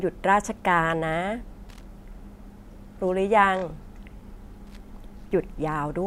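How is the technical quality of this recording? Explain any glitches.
The speech recording has two brief glitches, both loose connector crackle: from 1.69 to 1.87 s and from 4.67 to 4.77 s. A dirty or worn contact chops the signal intermittently, producing short irregular bursts of scratchy crackle.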